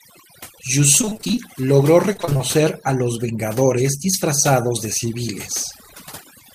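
A speech recording with two technical faults. Overdone noise removal runs through the whole clip. The background sinks to near silence, with small twinkling specks left where the noise used to be. The reduction was set too strong, so it cuts frequency bands that sit close to its noise estimate. Quiet parts of the voice fall into that range and are removed with the noise.

Repeated packet loss gives a robotic sound in two bursts, from 1.01 to 1.39 s and from 2.13 to 2.41 s. In each burst the voice turns choppy, with small pieces missing. The gaps come in quick succession, and none lasts much over 20 ms. Each hole is patched by stretching the sound just before it. In the first burst the patching fills about 173 ms, and in the second about 143 ms. That is roughly half of each stretch, which is why these two passages sound mechanical.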